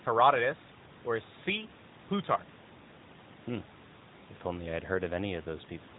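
Listening through the speech, nothing stood out as a technical problem.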